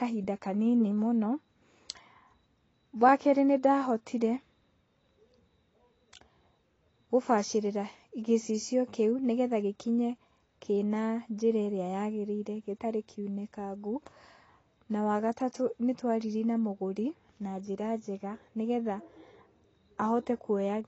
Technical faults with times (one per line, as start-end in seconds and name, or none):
0.00-20.87 AAC compression